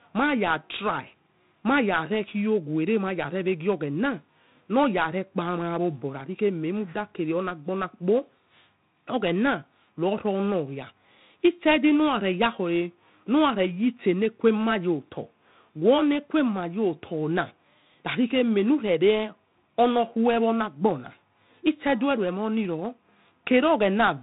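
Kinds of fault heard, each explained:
4-bit ADPCM compression: The encoder kept only a 4-bit step from a predicted value for each sample, adapting the step size as it went, so its rounding error rides along with the speech. Every louder stretch carries a gritty hiss, and sharp onsets smear and distort where the step lags behind. The damage here is heavy. Nothing is left above 3.9 kHz, giving a dull, narrow band that fits a 32 kbps stream at a low sample rate.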